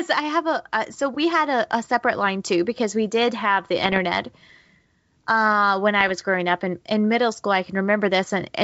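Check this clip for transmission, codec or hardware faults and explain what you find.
Two short disturbances in the speech point to bit errors on an ADPCM link, against a G.722 wideband coding path that otherwise sounds clean. From 3.84 to 3.99 s and again from 6.01 to 6.13 s, pops and a rough, grainy burst are heard, with the level briefly changing. The cause is flipped bits, at an error rate of a fraction of a percent. Each corrupted code also throws off the decoder's adaptive step size and prediction, so the damage rings on for several milliseconds.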